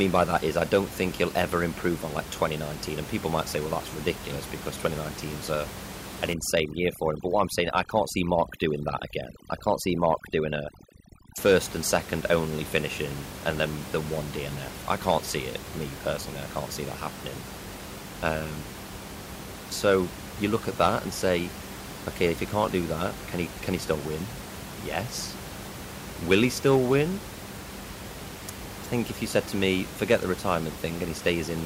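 Speech with room noise about 12 dB below the voice, until, from 6.33 to 11.38 s, between "a an" and "first and second only", the background drops and breaks up into twinkling specks. That is overdone noise removal: frequency bands near the noise estimate are cut hard, and quiet parts of the voice are cut with them.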